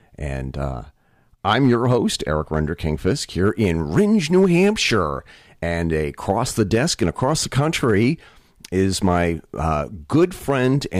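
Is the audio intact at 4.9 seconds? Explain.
No. At 4.9 seconds, as throughout the clip, a stage is driven about 3 dB past its ceiling, causing hard clipping. The loudest peaks, a small fraction under one percent of the audio, are sliced flat, adding high harmonics heard as brief crackle on the speech peaks.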